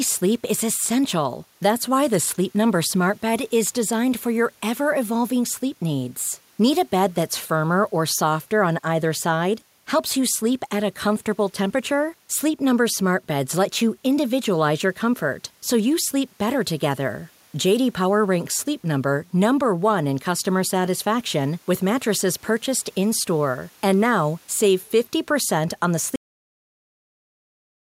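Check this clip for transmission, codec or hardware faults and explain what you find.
One fault shows up, a cut-off end at 26.16 s. The final buffers of the recording were never written out, so the speech stops abruptly mid-sound and drops straight into digital silence with no natural decay, staying silent through to the end.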